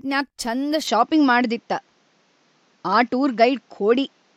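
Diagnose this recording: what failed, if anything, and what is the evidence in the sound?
Input switched to a poorer device at 0.87 s, lasting to the end of the speech. The change is abrupt and has no gap: from that point nothing is heard above 7.6 kHz, the level shifts by roughly 5 dB, and a new noise floor appears some 45 dB under the voice. At the capture stage, this is likely the driver handing recording over to a different, narrower-band microphone or headset path mid-take, bringing its own tone, gain and hiss.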